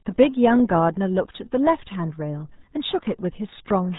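Throughout, the speech carries RealAudio 14.4 codec damage: a low-rate dial-up speech coder, consistent with roughly 8 kbit/s, discards everything above 3.8 kHz and coarsely models the rest. It sounds muffled and gargly. A spectrogram shows a hard ceiling at 3.8 kHz, with smeared, blotchy harmonics below.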